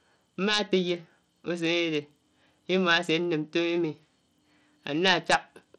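Throughout, the speech has no treble above 12.1 kHz and carries plainly audible gritty coding noise. This is likely Bluetooth SBC compression, starved at roughly 80 kbps.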